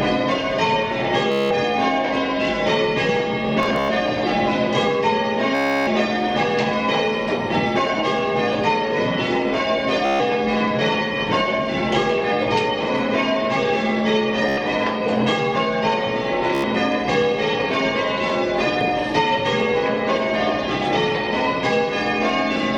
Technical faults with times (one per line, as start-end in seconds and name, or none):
1.32-1.51 Bluetooth stutter
3.63-3.89 Bluetooth stutter
5.55-5.87 Bluetooth stutter
10.05-10.20 Bluetooth stutter
14.49-14.58 Bluetooth stutter
16.55-16.64 Bluetooth stutter